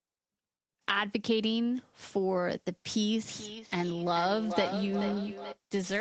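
From 3.19 to 5.6 s the speech comes round again roughly every 0.4 s, each pass thinner and more ringing, peaking about 6 dB below the speech. This is feedback echo between two devices. A nearby device replays the call and the microphone picks it up again. Unlike room reverb, it returns as distinct, evenly spaced copies rather than a smooth tail, within the call's band limit of 8 kHz.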